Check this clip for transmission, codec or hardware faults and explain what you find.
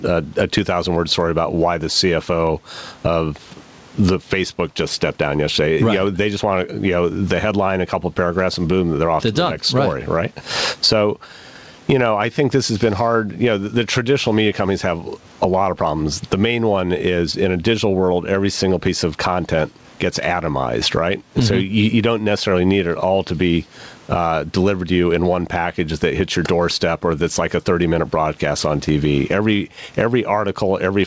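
One fault runs through the whole recording: gain pumping. Under each loud stretch of speech the gain is pulled down, a swing of around 20 dB, so loud and quiet passages sit unnaturally close in level and the sound feels squashed. The likely cause is microphone gain set far too high, with a fast limiter or compressor clamping down on every peak and releasing in the gaps. The room noise is about 45 dB below the speech, and the bandwidth stops at 8 kHz, which fits a wideband call codec such as G.722.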